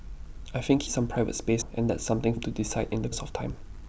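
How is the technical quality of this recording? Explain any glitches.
The speech has three glitches, at 0.87, 1.62 and 2.37 s. Each is audio missing between chunks: roughly a third of a second drops out, likely lost while one one-second chunk closes and the next opens. The speech jumps abruptly, and the waveform shows hard splices without a gap.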